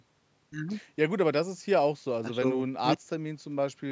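No technical faults can be heard in this speech; the bass roll-off and the top end stopping at 8 kHz are simply the normal result of call microphone processing.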